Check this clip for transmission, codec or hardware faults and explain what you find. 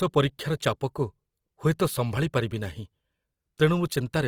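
One codec fault runs through the whole speech clip. Opus compression is the likely cause: the music (CELT) mode keeps each band's energy but fills starved bands with folded or noise content, so the speech sounds grainy and rough. Damage is plainly audible, consistent with roughly 24 kbps, though bandwidth stays full, reaching about 20.3 kHz.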